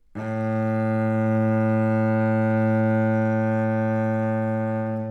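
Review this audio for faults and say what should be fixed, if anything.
From 1.64 s to the end at 5.1 s, there is a time-stretched section. The pace suddenly drops to about 0.53 times normal speed, yet the pitch does not fall. The sound drags. This is likely the work of stretching software that padded the audio to fit a set length. To prevent it, trim or edit to length instead of stretching.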